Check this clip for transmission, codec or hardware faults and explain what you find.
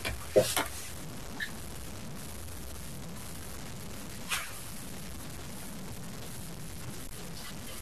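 One fault runs through the whole clip: low bit depth without dither. The speech sounds gritty and grainy, with quiet parts sputtering or dropping out. The likely cause is truncation to about 6 bits, leaving distortion that tracks the speech and is nearly as loud as it.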